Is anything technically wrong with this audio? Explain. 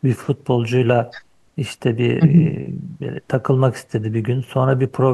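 No, nothing stood out as technically wrong on listening to this speech recording.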